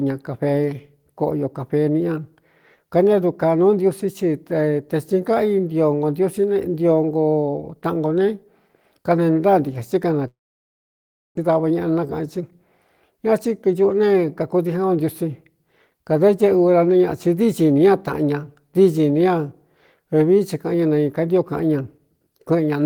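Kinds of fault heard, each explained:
Long network dropout: At 10.27 s the sound cuts out, with a brief concealment tail fading into about one second of silence until 11.39 s, when audio resumes with roughly a second missing. This is likely a stall in packet arrival, with the receiver concealing the gap and then giving up.
Jitter buffer speed-up: From 11.49 s to 12.39 s the speech runs about 7% fast at unchanged pitch and sounds slightly hurried. The receiver trims short pitch-period segments, around 70 ms in total, to drain the audio that piled up after the dropout.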